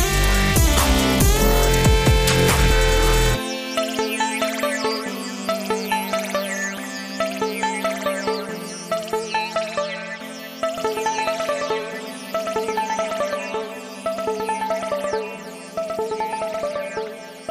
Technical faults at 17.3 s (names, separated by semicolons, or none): doubled audio track